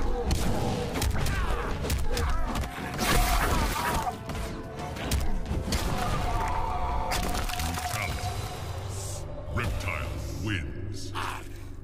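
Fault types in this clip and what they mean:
Dropped buffer (overrun), at 1.51 s and 4.43 s: each is heard as a small jump forward in the sound with no gap of silence. About 10 ms goes missing at the first point and about 5 ms at the second, with the audio on either side butted straight together. This is likely an overrun, where the recording software failed to collect a block of samples before the hardware wrote over it.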